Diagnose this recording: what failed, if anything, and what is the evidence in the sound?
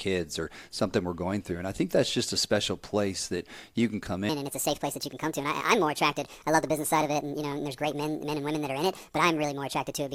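From 4.29 s to the end, the speech is a section at the wrong speed. It runs 1.52 times too fast, so pitch rises by about seven semitones and syllables sound hurried. The likely cause is a clock or sample-rate mismatch at the playback or editing stage. On a spectrogram, harmonics and formant bands jump upward by that same ratio at 4.29 s, and the waveform shows syllable envelopes squeezed closer together from that point.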